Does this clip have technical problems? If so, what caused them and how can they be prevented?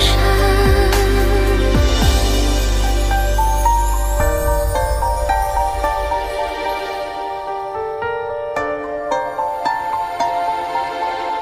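No, no technical problems can be heard in this clip. With no faults present, there is nothing here that needs preventing.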